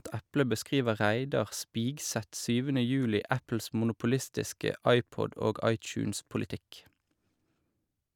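No technical faults can be heard anywhere in this recording.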